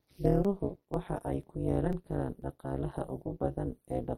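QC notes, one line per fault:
throughout: overlap-add ripple. The level pumps at around 200 Hz, giving the speech a metallic buzz with extra tones around each note. The windowed frames were rejoined with an overlap that does not sum to constant gain, so the level dips by about 60 dB once per frame.
0.45, 0.94, 1.43, 1.93, 2.42, 2.91 and 3.41 s: audio missing between chunks. Each is a short skip of about 7 ms with the two sides butted together, no silence, falling before "waxa ay ku" at 0.45 and 0.94 s and after "waxa ay" at 1.43 s. The strict 0.5 s spacing points to a likely loss at each chunk handover.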